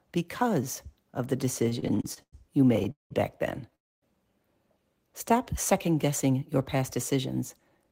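Stuttering, dragging speech runs from 1.59 to 3.12 s, between "because of the" and "back then": the sound repeatedly stalls, held or fading, across 16 gaps totalling 491 ms, the longest 192 ms, so about a third of that stretch is filler. These repeated stalls (stutter) come from packets arriving late or slower than playback, draining the jitter buffer again and again while the receiver extended the last sound until it could resume. Right after "back then", from 3.75 to 4.04 s, the audio stops for 268 ms, with the last sound briefly carried on before 240 ms of silence, and then picks up where it left off with nothing lost. That is a call audio freeze, most likely from packets held up in transit emptying the jitter buffer, which shifted the delay by 268 ms. Near the end the speech sounds hurried but keeps its pitch: from 6.34 to 7.13 s it plays at 107% speed, and from 7.58 s to the end at 110%. 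This jitter buffer speed-up happens when too much audio has built up in the buffer and the receiver trims short pitch-period pieces to reduce the delay, cutting roughly 70 ms and 50 ms respectively.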